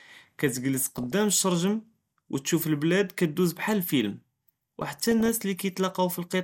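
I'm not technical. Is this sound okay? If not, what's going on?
No. Throughout, the speech sounds dull and plainly gurgly. This is likely MP2 compression, which drops the higher sounds to save space.

From 0.77 to 1.12 s and from 4.81 to 5.29 s, short blips of noise appear. This is DAB burbling, where reception errors damage the digital radio signal.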